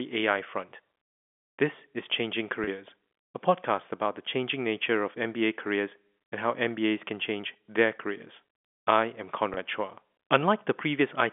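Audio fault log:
2.64–2.67 s and 9.54–9.57 s, packet loss with pitch repetition: each is a 30 ms gap, which fits a single lost packet, bridged by repeating the last pitch period. You hear a quick held, buzzy blip, the second right after "their careers I am".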